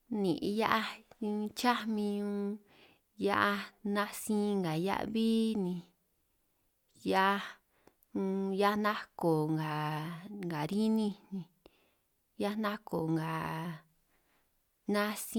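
No technical faults can be heard anywhere in the recording; the signal stays steady and intact throughout.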